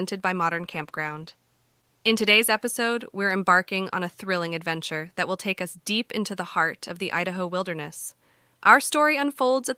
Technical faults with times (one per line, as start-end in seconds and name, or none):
0.54-3.13 call bitrate drop